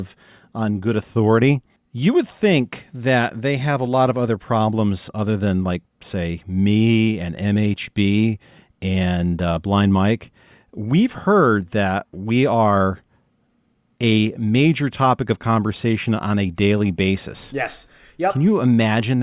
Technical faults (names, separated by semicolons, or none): none